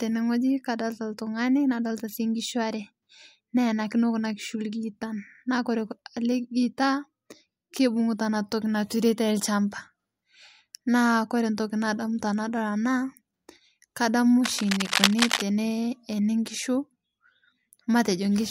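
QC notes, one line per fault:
14.44–15.42 s, cable scratch noise: a dense, ragged burst of scratching and rustling sits over the speech for about a second, roughly as loud as the speech itself, most likely from a worn cable or connector being moved and its contact resistance fluctuating rapidly.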